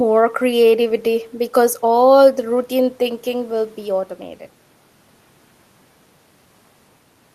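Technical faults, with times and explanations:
No technical faults detected.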